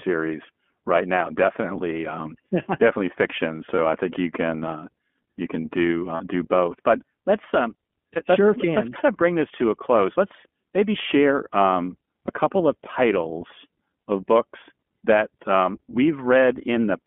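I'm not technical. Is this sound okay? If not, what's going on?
No. The speech was squeezed through the iLBC codec, a phone-call system that splits the voice into 20 ms chunks and keeps only a narrow band, about 200 Hz to 3.4 kHz. The result sounds muffled like a phone line, slightly rough and synthetic.

There are also lost iLBC frames, where small pieces of the call never arrived. The decoder filled each gap by repeating the last bit of voice, giving a brief buzzy, held sound at 3.76–3.79, 6.16–6.22, 8.14–8.18 and 12.26–12.30 seconds.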